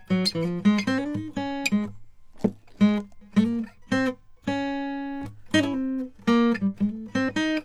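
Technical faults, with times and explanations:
No technical faults turn up anywhere in this bit of music; it just runs along without anything going wrong.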